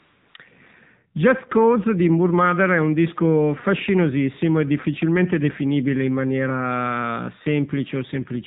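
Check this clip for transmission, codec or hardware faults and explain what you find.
There are two faults here, both from a narrowband mobile link.

The AMR narrowband mobile codec runs throughout. It rebuilds the speech from a vocal-tract model and a few pulses per subframe, so everything above 4 kHz is gone and the speech sounds plainly buzzy and synthetic. That damage level fits a low mode around 7.4 kbps.

AMR comfort noise covers the opening, from 0 to 0.34 s. The sender treated that stretch as silence and stopped sending speech, so the receiver filled it with smooth synthetic noise built from a rough level and spectrum. You hear a steady hiss that then switches out.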